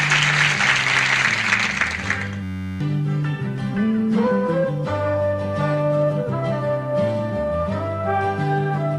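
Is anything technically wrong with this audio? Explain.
Yes. From 2.43 to 2.81 s the audio becomes a steady, rough buzz near 94 Hz. This is a system hang loop: the computer or driver froze while the hardware kept replaying one 10.67 ms ring buffer, which fits a 512-sample buffer. Around 0.4 s of audio is lost.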